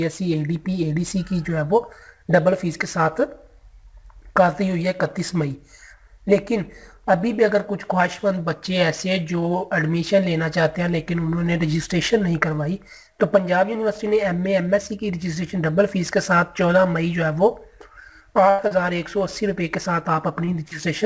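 At 18.50 s the sound abruptly freezes into a held, fading tail that lasts to about 18.62 s, then jumps ahead as if a slice had been skipped. This is a burst of packet loss: roughly 90 ms of audio never arrived in time. The receiver filled the hole by stretching the last sound and turning it down, covering about 86 ms before the stream resumed further along. The skipped material is simply gone.

Three shorter blips follow, at 18.68 to 18.74 s, 20.45 to 20.50 s and 20.68 to 20.74 s. Each is a quick smear or wobble of a few hundredths of a second, and a brief sound can drop out inside it. These are short concealed packet losses. Each time about 30 ms failed to reach the decoder, and the receiver patched it by extending the preceding sound, from its pitch or as shaped noise, before blending back into the real signal. The call path's wideband coding, which leaves nothing above 8 kHz, can be heard around all of this.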